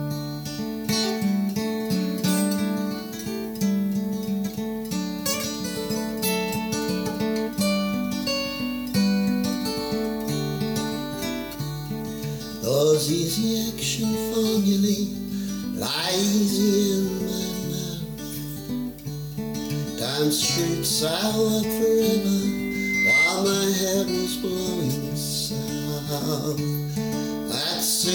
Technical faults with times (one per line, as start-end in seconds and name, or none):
22.46-23.42 loudspeaker feedback squeal